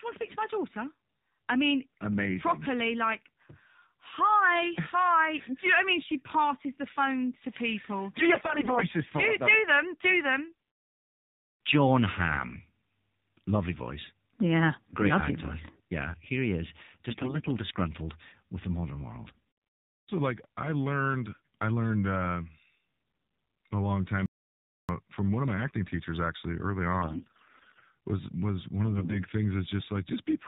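Throughout, the speech is thin and buzzy, with nothing above 4 kHz and a synthetic edge. This is the AMR narrowband mobile codec at a low rate, which fits 7.4 kbps, rebuilding the voice from a coarse vocal-tract model and few pulses.

From 8.16 to 8.84 s, just before "for do them", the voice turns hoarse, scratchy and gargly while keeping roughly its pitch and level. The same roughness returns from 17.10 to 17.51 s, between "here he is" and "disgruntled with the modern", and as a brief scratch at 19.37 s. These are AMR bit errors: flipped low-priority bits misplace the excitation pulses and skew fine pitch, gain and spectral values. The damage is heavy in the first burst, with something like one bit in seven corrupted, and milder at 17.10 s.

From 24.26 to 24.89 s the sound cuts to total silence for about 630 ms, with no room tone at all, and whatever was said there is lost. This is an audio dropout to silence, likely from the input link failing while silence kept being written.

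The gargly bit-error sound returns from 27.02 to 27.85 s, between "acting teachers actually early" and "was was one", and again from 28.86 to 29.20 s.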